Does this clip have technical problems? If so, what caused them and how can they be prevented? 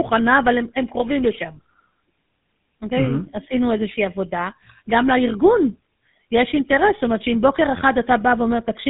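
Yes. The whole clip has tandem speech coding: the speech went through GSM full rate at 13 kbit/s, out through 64 kbit/s G.711, then back into GSM full rate, so two lossy speech coders ran in series, the second one re-coding the first one's errors. That piles up roughness and warble beyond a single GSM pass, and nothing is heard above 3.8 kHz. A plain band limit would stay muffled but smooth. Keeping the call in one codec end to end, with transcoder-free operation, prevents it.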